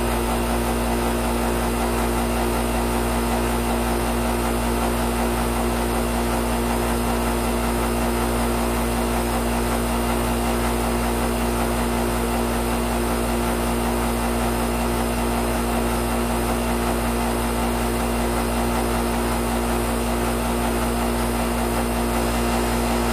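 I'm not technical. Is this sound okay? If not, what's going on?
Yes, this sound is okay. Nothing in it points to a technical problem.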